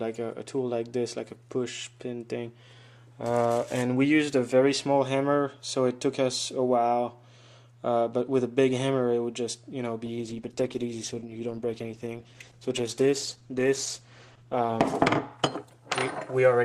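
A call bitrate drop from 10.07 to 16.41 s starves the encoder of bits, so the sound turns coarse, watery and muffled, consistent with roughly 12 kbps.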